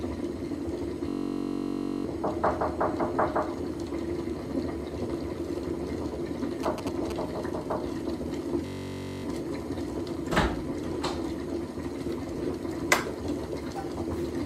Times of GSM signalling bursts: 6.63-7.12

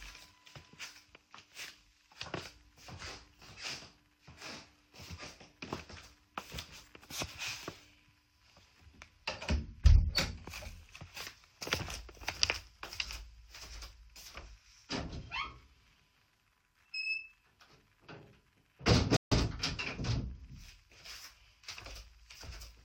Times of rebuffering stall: 19.17-19.32

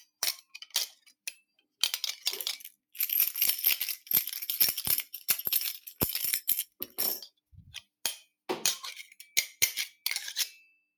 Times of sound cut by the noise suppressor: 5.80-6.00, 6.65-6.99

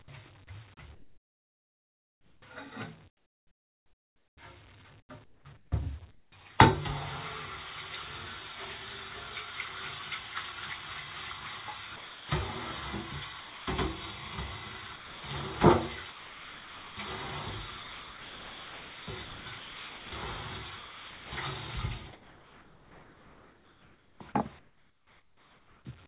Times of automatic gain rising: none

